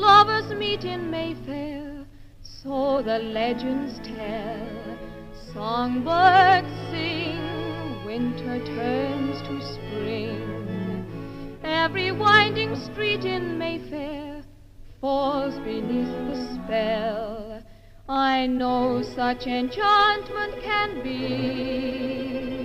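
No faults can be heard anywhere in the clip, with nothing to report at any point.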